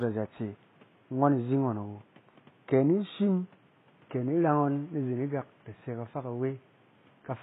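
Throughout the clip the speech treble sounds bright but synthetic, and the s sounds come out gritty and lispy, with a metallic sheen that does not quite belong to the voice. This points to HE-AAC compression, likely at a low rate around 16 kbps. The coder keeps only the lower spectrum and fabricates the top by copying lower bands upward, so the rebuilt harmonics fail to line up. The room noise sits about 32 dB below the speech.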